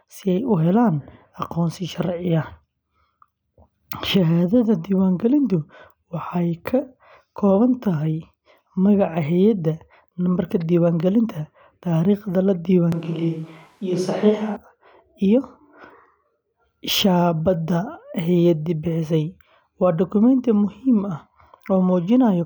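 At 12.92 s, right after "nambarka diiwaangelinta taariikhda la", the voice suddenly turns roomy and hollow. The bass thins and reflections from the room come forward. Overall loudness barely changes. Background noise sits roughly 35 dB below the speech. This is a switch to a distant microphone. The close microphone's signal likely dropped out, leaving a mic further from the talker. At 14.56 s the close, full sound snaps back just as abruptly.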